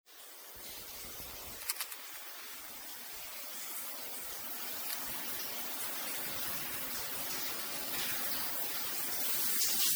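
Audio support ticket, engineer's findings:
Generation loss, whole clip: swirly, hollow, smeared texture; transients blurred. Likely repeated MP3 re-encoding, around five passes, consistent with a 96 kbit/s chain. Each pass requantises on a shifted frame grid. Spectrogram: stacked spectral holes, smeared onsets, muddy high band.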